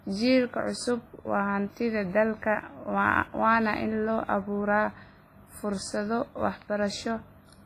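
All the way through, the speech has a ringing, washy smear with hiss that breathes along with it, likely WMA compression at a low bitrate around 24 kbps, with nothing above 15.4 kHz.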